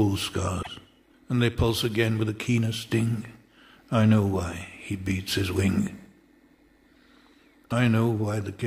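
At 0.62 s the sound skips ahead into a brief garbled glitch lasting 0.06 s, and at 7.69 s a shorter 0.03 s glitch follows; both point to a broken MP3 bit reservoir, likely from dropped frames whose successors borrowed bytes that were no longer there.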